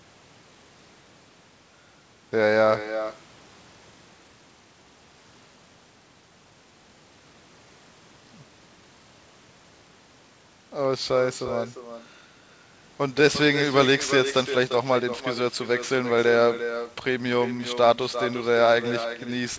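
Speech runs through the whole clip with an echo with no canceller: each phrase returns roughly 0.4 s later as a thinner copy about 11 dB quieter. The far end's loudspeaker is feeding its microphone and nothing removes it. Unlike room reverberation, it is a distinct delayed repeat rather than a smooth tail. The band stops at 8 kHz, which fits a G.722 call path.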